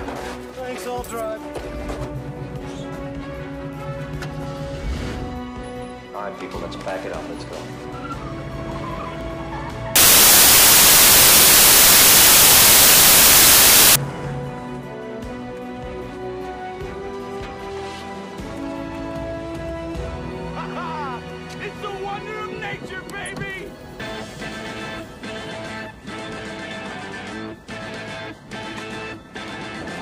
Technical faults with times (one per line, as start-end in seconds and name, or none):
9.96-13.96 samples built from the wrong bytes